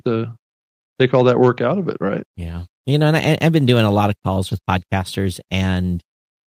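No technical faults can be heard in this recording.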